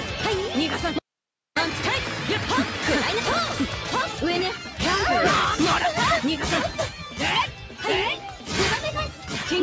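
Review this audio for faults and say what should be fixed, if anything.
Noise suppressor applied to music or sounds: A speech-oriented noise suppressor is active for the whole clip. It treats sustained content and decays as noise, so held material and tails are pulled down while onsets pass, producing a level swing of around 5 dB that reads as pumping and a thinned, fluttering sustain. The call microphone processing is also present; its band limit leaves nothing above 8 kHz. To prevent this, bypass or disable speech noise suppression whenever the source is not speech.

Audio dropout to a faint residue: From 0.99 s to 1.57 s, about 0.58 s, the signal cuts out abruptly and returns just as abruptly. The gap holds only hiss, roughly 50 dB below the programme level, so the path after the break stayed live while the wanted input was lost. The likely cause is a momentary loss of the source feeding that path. 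To prevent this, secure the input connection and monitor upstream buffering so the feed cannot starve.

Sound cut by the noise suppressor: Four events in the final seconds show the suppressor clamping down on sustained or fading content. The first runs from 6.89 s to 7.20 s with a drop of about 8 dB. The next three drop about 10 dB each, at 7.47 to 7.85 s, 8.16 to 8.52 s and 9.08 to 9.48 s. Each lasts roughly 0.3 to 0.4 s. To prevent this, lower the suppression depth or turn the suppressor off for non-speech material.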